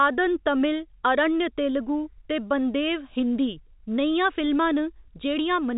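Nothing goes wrong in this speech recording; it just carries the narrow, phone-line character of G.711 telephone coding, with nothing heard above about 4 kHz.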